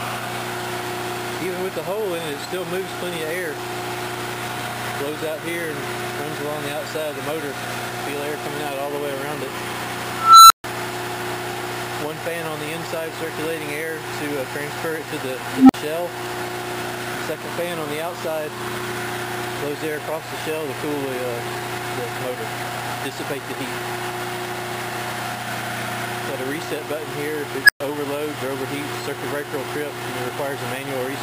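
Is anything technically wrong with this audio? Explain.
Yes. An unstable filter appears three times: a recursive filter's feedback runs away, so its output grows without bound until the values overflow and the filter resets. Each event is a tone swelling to a loud, clipped squeal, then a brief dropout to silence. At 10.12–10.64 s, a tone around 1.5 kHz builds over 378 ms, followed by 139 ms of silence. At 15.52–15.74 s, a lower tone around 300 Hz builds over 172 ms, followed by 46 ms of silence. At 27.64–27.80 s, a tone near 1.5 kHz builds in only 46 ms, followed by 116 ms of silence.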